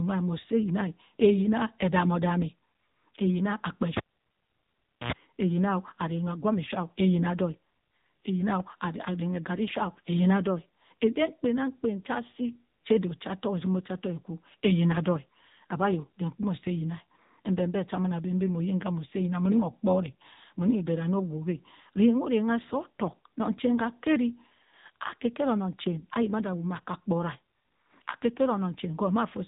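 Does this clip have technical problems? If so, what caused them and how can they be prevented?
Yes. The AMR narrowband mobile codec affects the whole clip. The speech has nothing above 3.8 kHz and sounds buzzy and synthetic, because the codec rebuilds it from a vocal-tract model driven by sparse pulses. That damage points to a low mode of roughly 8 kbps. To prevent it, record or transfer over a wideband or uncompressed path rather than a mobile call.

A cable was pulled and plugged in from 3.97 to 5.12 s. A pop cuts the sound to near silence for about 1.1 s. Then an 84 ms burst of 60 Hz mains buzz comes through as the plug's tip makes partial contact, and a second pop brings the audio back. To prevent it, secure the connectors and mute the channel before touching any cable.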